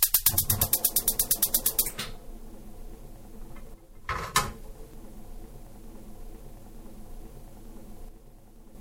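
An everyday sound recording that twice drops abruptly by about 6 dB, from 3.74 to 4.35 s and from 8.09 to 8.75 s, with the level snapping back just as suddenly afterwards. The likely cause is one channel dropping out before the stereo pair is summed to mono. Shared content halves, and anything present only in the lost side vanishes. On a waveform these appear as flat-edged, step-shaped dips in the envelope. A spectrogram shows uniformly dimmer vertical bands with sharp boundaries.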